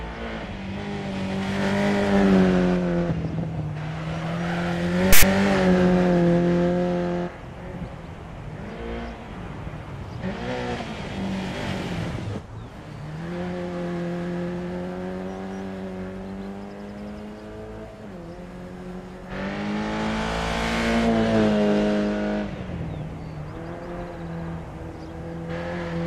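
At 5.13 to 5.23 s, file tags played as audio: text tag bytes are read as samples, producing a hard-edged 0.1 s rasp offset to one side.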